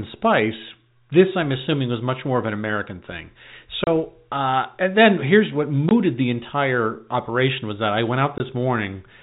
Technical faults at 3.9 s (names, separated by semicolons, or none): packet loss filled with silence